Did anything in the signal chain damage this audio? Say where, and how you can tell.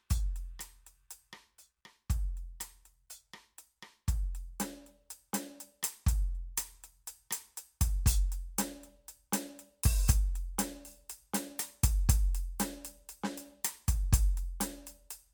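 No, nothing in the signal chain has left an audible mark on this music; it shows no sign of damage from any stage between capture and playback.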